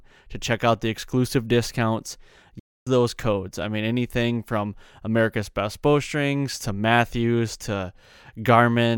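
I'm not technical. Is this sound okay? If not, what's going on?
No. There is a playback stall in this speech. At 2.59 seconds the sound suddenly cuts out and goes silent. The silence lasts about a quarter of a second, until 2.87 seconds, and then the audio carries on. The most likely cause is that the player briefly ran out of audio to play, or was held up by other work on the device. While it waited, nothing came out.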